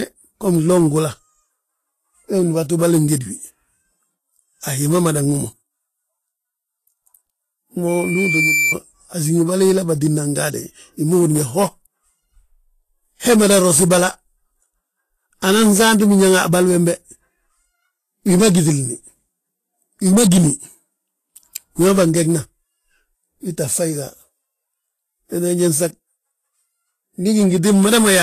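From the start the speech has a grainy, hissy top end with nothing above 14.2 kHz, and the treble detail has turned to noise. That's plainly audible damage, likely from Vorbis compression, at a rate that points to something near 30 kbps.

Then from 7.88 to 8.75 s there's a loudspeaker feedback squeal: a 2.3 kHz tone swells over roughly 0.7 s to about the level of the speech. The mic was picking up its own speaker, and the loop ran away at that frequency.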